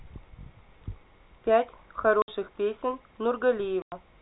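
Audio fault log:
2.22 s and 3.82 s, packet loss filled with silence: lost packets replaced by silence leave 60 ms and 100 ms holes in the speech, fitting 20 ms packets, with abrupt edges.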